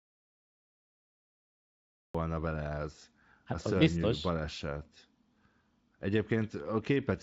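From the start of the speech to 2.15 s there is an audio dropout to silence: silence with no room tone, already under way when the clip begins. The input was likely lost, through a disconnected device or failed link, while recording continued writing silence. Speech then enters abruptly, carried by a Speex codec whose band stops near 7.7 kHz.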